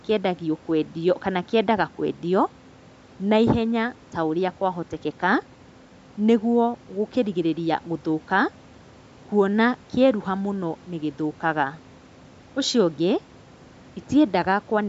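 No technical faults are audible; the speech carries the expected signature of call microphone processing, with content stopping at 8 kHz and the lowest bass removed by its high-pass filter.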